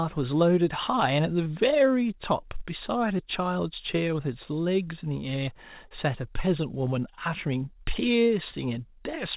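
At 1.44 to 1.47 s, 3.17 to 3.21 s, 5.89 to 5.93 s and 8.51 to 8.54 s there is short concealed packet loss. Each time about 20 ms of speech arrived too late, and the receiver bridged the gap by extending the preceding sound before crossfading back. Each is heard as a brief smear or wobble. On a spectrogram each shows as a narrow patch of repeated harmonics or blurred noise, and on the waveform as a brief, overly regular stretch. All of this sits inside a band that stops at 4 kHz, which fits a G.711 call path.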